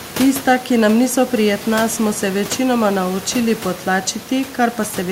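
Speech, no technical faults, with room noise sitting about 17 dB below the voice as part of the recording.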